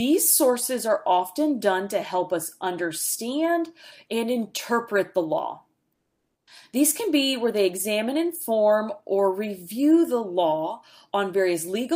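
Discontinuous transmission, likely from an Opus encoder, halts the stream from 5.95 to 6.47 s, so the receiver substitutes comfort noise in place of the background for about 520 ms. The quiet background, about 60 dB below the loudest passages, becomes a flat, featureless hiss that drops about 16 dB before the real sound resumes.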